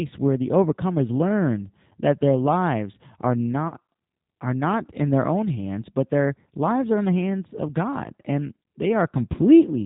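A speech recording that sounds band-limited, slightly rough and synthetic throughout, with nothing audible above 4 kHz. This points to the G.729 codec at around 8 kbit/s, rebuilding the voice from a filter, a pitch predictor and sparse pulses, and its damage is plainly audible. Right after "that their lives are", from 3.68 to 3.73 s, the sound smears and fades, and a shorter smear occurs at 9.32 to 9.36 s. This is VoIP packet loss concealed by the speech codec, which extrapolates from its last pitch and filter. The gaps of about 40 ms and 20 ms fit two lost packets and then one.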